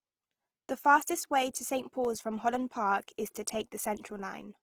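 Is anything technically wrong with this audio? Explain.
Yes, there's plainly audible Opus compression running through the whole speech clip. The spectrum still extends to about 20.4 kHz, yet it sounds grainy and rough, with tonal parts turned noisy. That likely comes from the encoder's music mode at a starved rate, something like 16 kbps, filling bands with folded or noise content.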